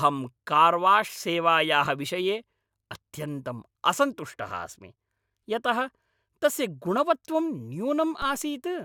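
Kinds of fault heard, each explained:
DC step: near the end, the waveform's zero line jumps by about -28 dBFS, a low thump and thin vertical spectrogram line, then decays through a 5 Hz high-pass.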